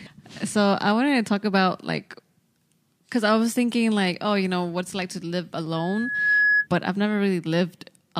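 Speech with loudspeaker feedback squeal from 5.76 to 6.67 s: a 1.7 kHz tone builds over about half a second to roughly 5 dB above the voice, showing as a bright horizontal spectrogram line and swelling waveform envelope.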